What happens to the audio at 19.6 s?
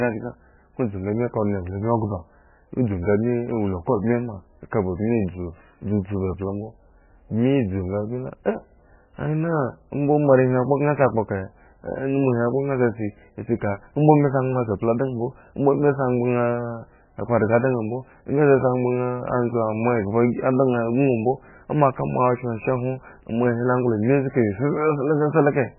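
At 19.6 s you're hearing the same thing that runs through the whole clip: likely MP3 compression, and heavy at that. Nothing comes through above 3 kHz, so the top end is simply shaved off, and the encoder is dropping weak frequency lines that flicker in and out between frames. That gives the speech a watery, swirly quality with smeared onsets, which fits a starved bitrate somewhere around 9 kbps.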